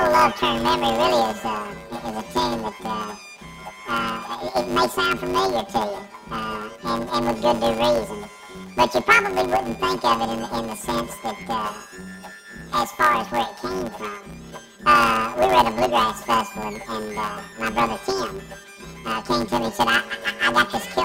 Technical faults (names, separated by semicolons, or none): planar audio read as interleaved